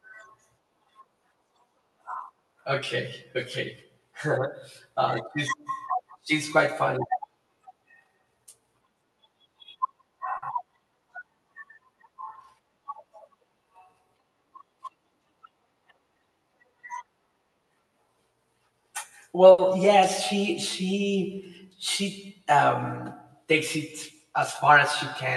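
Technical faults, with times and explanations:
10.37–10.55 s and 19.51–19.60 s, short stall from a late packet: A packet arrived late each time. The jitter buffer ran dry. The receiver stretched the last sound to cover the gap, by 50 ms the first time and 70 ms the second. Then it carried on from the same point, so nothing is lost. You hear a sound held slightly too long, with a faint buzz or dip. The second stall comes just before "yes she she she".
13.64–14.31 s, jitter buffer speed-up: The buffer held more audio than it aims for. To cut the delay, the receiver removed short pitch-period slices again and again, about 50 ms in total. The speech runs at about 107% speed while the pitch stays the same. That is why this stretch sounds briefly hurried. The added delay from the earlier stall is one likely reason the buffer was overfull.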